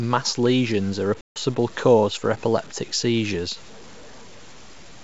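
From the start, the samples were likely truncated to around 7 bits without dither, leaving grainy distortion roughly 25 dB below the speech that tracks it, roughening quiet passages. At 1.21 to 1.38 s, ADPCM packet loss blanks about 150 ms after "lesions are a", consistent with roughly fifteen lost packets. The mistracked decoder brings "cause for epileptic seizures" back with brief, slight distortion.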